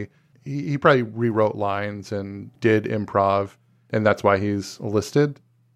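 No technical faults can be heard anywhere in the recording.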